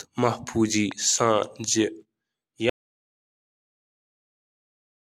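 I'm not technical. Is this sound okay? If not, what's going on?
No, not quite. The speech runs fine up to about 2.7 seconds, then cuts out abruptly and stays completely silent right to the end of the clip. That's an audio dropout to silence: there isn't even the faint background hiss you'd normally hear in a room, just nothing at all. The likely cause is the input getting lost partway through, say a loose or disconnected mic or an accidental mute, while the recording kept going with blank audio. Whatever was said after that point is missing.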